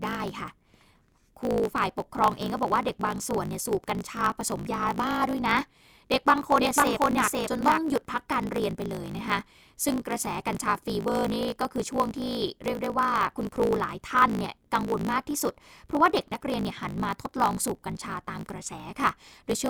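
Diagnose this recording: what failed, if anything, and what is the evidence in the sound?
Block size mismatch (truncated), in the driver or buffer stage, runs through the whole recording. A steady buzz near 54.4 Hz sits under the speech, and everything plays 1.16 times too fast while the pitch stays close to normal. One stage hands over longer blocks than the next one takes, and the tail of each block is dropped. This fits a writer producing 1024-sample blocks. Each discarded tail shortens the timeline and leaves a seam at the block rate, which is heard as the buzz.

A doubled audio track appears from 6.60 s to 7.79 s. A second full-band copy of the speech trails the original by about half a second, at roughly the same level. It carries no reverberant decay or room colouring, and it switches in and out abruptly at both ends. This is likely an editing error or a second, slower capture path where two misaligned copies were summed, rather than acoustic echo or a feedback path.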